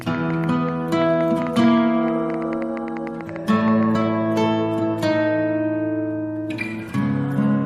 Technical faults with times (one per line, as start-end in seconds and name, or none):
0.01-4.03 train of clicks